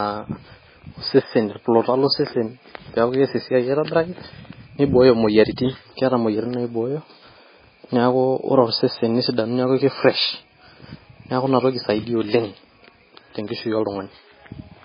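MP3 compression, throughout: nothing above 5 kHz and a watery, swirly quality to the speech, likely from an encoder starved near 16 kbps dropping weak frequency lines.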